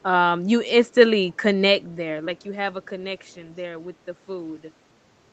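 At 1.28 to 1.42 s and again at 2.37 to 2.44 s, a faint, delayed copy of the speech surfaces, trailing the original by about 0.28 s. This is an echo leak, likely from a far-end loudspeaker whose echo canceller let some of its own output back into the microphone. The scraps sit far below the speech, so they register as a brief ghostly smear. A spectrogram shows weak harmonic traces repeating the preceding syllables, cut off at 8 kHz like the speech itself.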